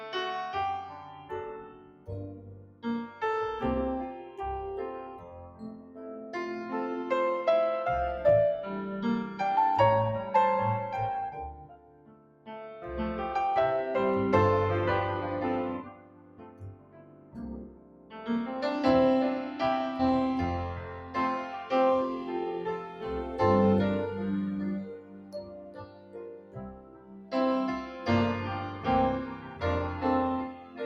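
Noise suppressor applied to music or sounds, throughout: a suppressor built for speech stays active across the whole clip, treating sustained content and ambience as noise. Gain swings by roughly 15 dB, so onsets pass while held sound sinks, giving a pumping, thinned texture.

Sound cut by the noise suppressor at 0.89–3.21 s (about 14 dB), 4.3–6.3 s (about 10 dB), 11.5–12.81 s (about 14 dB), 15.83–18.28 s (about 14 dB), 20.87–21.15 s (about 6 dB), and from 24.84 s to the end (about 14 dB). In each stretch the suppressor judged the steady or decaying material to be noise and pulled it down harder than the rest. Tails collapse early while sharper attacks still come through.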